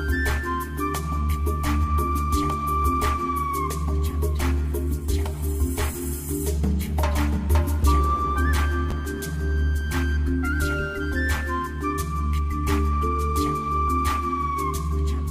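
At 8.91 s, chunks out of order: a 5.8 ms chunk lands two chunks late, giving a brief jumbled moment, with waveform discontinuities and thin vertical spectrogram lines at each join.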